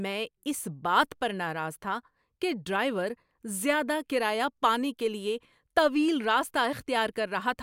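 A short stretch of speech, and nothing technically wrong turns up anywhere in it, so there's nothing to time or trace back to a cause.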